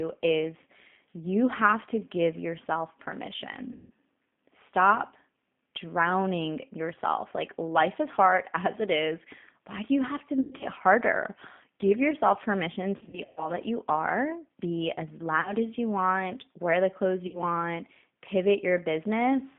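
The whole clip carries G.729 codec damage at 8 kbit/s. Sound is limited to 150 Hz to 3.5 kHz and is plainly rough and synthetic. Packet loss concealed by the speech codec strikes at 3.72 to 3.91, 10.41 to 10.65 after "do you have to", 12.97 to 13.52, 15.41 to 15.53 and 17.27 to 17.39 s. The decoder stretches the last sound into a fading buzzy tone or coloured noise.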